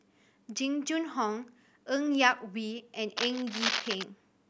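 From 3.17 to 4.04 s, cable scratch noise: dense, uneven crackling bursts sit only slightly below the speech, likely from a worn cable or connector being moved.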